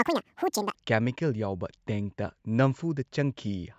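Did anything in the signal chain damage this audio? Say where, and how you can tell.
Yes. There's a wrong sample rate fault at playback from 0.0 to 0.75 s. The speech comes out twice as fast and a full octave high, which fits 16 kHz material played at 32 kHz with no conversion, so speed and pitch rise together.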